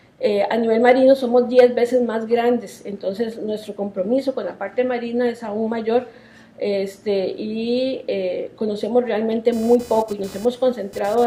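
A buzzy, chirping whine appears at 9.52 s and runs to the end of the clip at 11.26 s, pulsing at a rate of roughly 500 per second and sitting well beneath the sound, around 25 dB down. This is computer activity noise. Changing load on the processor, graphics card or mouse disturbs the ground the audio circuit shares with them, so the interference follows the machine's workload rather than anything in the recording itself.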